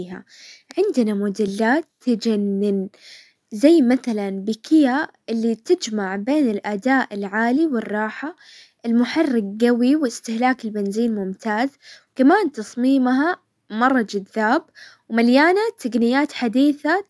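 A short recording of speech, with nothing technically wrong to point to. No fault can be heard at any point, so there is no time or cause to report.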